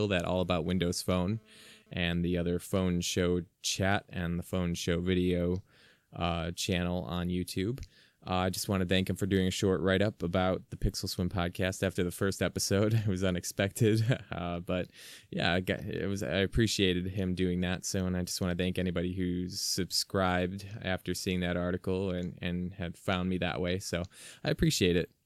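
A nearby 2G handset transmitting data in bursts at about 217 Hz was rectified by the audio circuitry, causing GSM phone buzz in this speech recording: a raspy, harmonic-rich burst about 32 dB below the signal from 0.45 to 1.91 s, ending just before "and the other phone".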